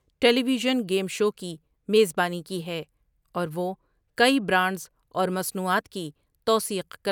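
Nothing in the speech here points to a technical fault, so there's nothing to flag.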